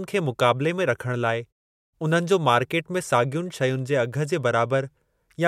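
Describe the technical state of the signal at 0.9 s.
At 0.9 s the speech signal is intact, with no fault present at that moment.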